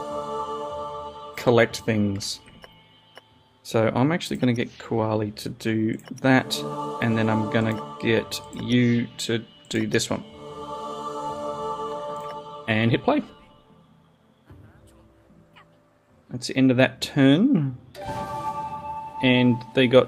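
No technical faults can be heard anywhere in the recording; the signal holds steady throughout, with nothing breaking into it or dropping out of it.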